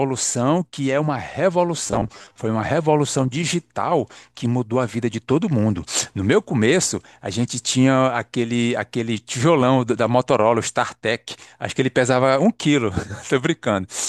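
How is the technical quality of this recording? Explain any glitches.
There's one real glitch here. From 1.87 to 2.38 s you get robotic sound from repeated short buffers. The speech turns into a stiff, metallic 100 Hz buzz, likely because a 10 ms chunk keeps looping while roughly half the real audio gets skipped.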